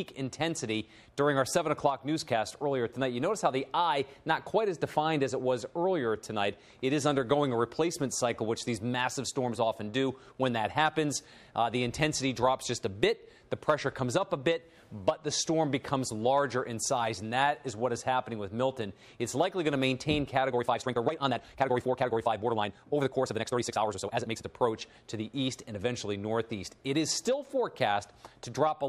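From 20.47 to 24.47 s there's a time-stretched section: the audio suddenly runs about 1.74 times faster for those four seconds, yet the pitch doesn't rise with it. It comes across rushed, with short pieces dropped to squeeze it down. That points to software that likely compressed the stretch to fit a shorter slot while holding pitch steady, rather than a simple speed-up.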